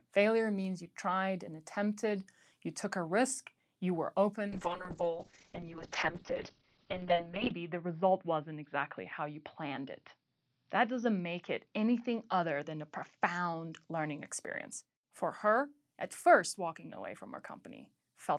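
Speech with a call bitrate drop from 4.48 s to 14.33 s. The call's bandwidth estimate fell, so the encoder was forced to spend far fewer bits. The sound coarsens and turns rough and watery. High frequencies vanish above 6 kHz, so it also goes muffled. The worst stretch lasts about 3 s. The damage points to a fall from around 48 kbps to roughly 6 kbps. Quality then climbs back as the rate recovers.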